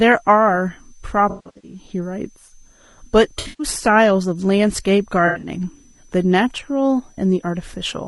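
A switching power supply is whining in the background of this speech recording, leaving a faint high whistle that wanders between about 5.9 and 6.2 kHz, well below the voice. Low-delay AAC compression is likely behind the rough, grainy voice with a thin, synthetic top band, which fits a low bitrate near 32 kbps. AAC frame loss with concealment hits at 1.29–1.79 s, 3.39–3.67 s and 5.27–5.49 s, where the decoder fills the gaps with smeared, noisy, phasey patches, the longest dropout around 150 ms.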